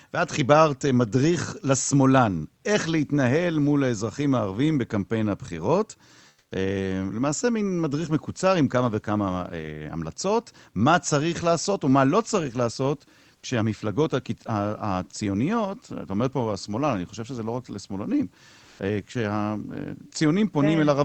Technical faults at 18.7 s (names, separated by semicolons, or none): comfort noise in place of the background